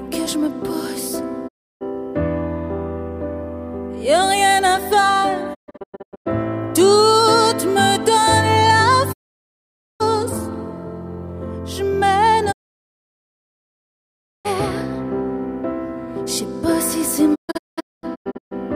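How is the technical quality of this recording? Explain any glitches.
Poor: digital broadcast dropout mutes the sound five times, at 1.47–1.83 s, 5.53–6.28 s, 9.12–10.02 s, 12.51–14.47 s and 17.34–18.56 s. The receiver lost valid frames and muted behind 20 ms fades until clean frames returned, so that audio is gone. The second and fifth dropouts break into short scattered holes (longest 128 ms and 224 ms). On a waveform or spectrogram, each appears as a flat, blank gap with tapered edges.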